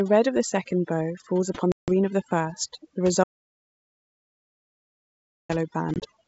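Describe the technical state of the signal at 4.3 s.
At 4.3 s you're sitting in the middle of an audio dropout to silence that runs from about 3.24 s to 5.49 s, right after "of the first the". Roughly 2.26 s of signal is just gone, replaced by silence with no room tone at all, so it sounds like a hard cut rather than a pause. The likely cause is the input being lost while the recorder kept writing empty samples.

On either side of that gap, overdone noise removal runs through the whole clip. The denoiser was set so aggressively that any frequency band close to its noise estimate gets pushed right down, taking the quieter parts of the speech with it. Around the dropout that leaves a near-silent background flecked with little twinkling artefacts, while the clean 64 kbit/s G.722 wideband coding adds at most faint damage of its own.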